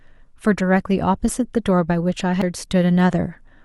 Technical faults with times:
2.41-2.45 damaged data in a compressed stream

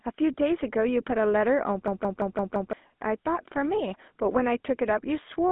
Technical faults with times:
0.00-5.51 GSM full-rate codec
1.88-2.73 system hang loop

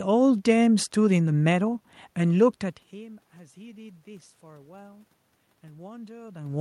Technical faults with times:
none

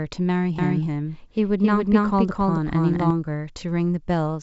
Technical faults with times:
0.58-3.10 doubled audio track

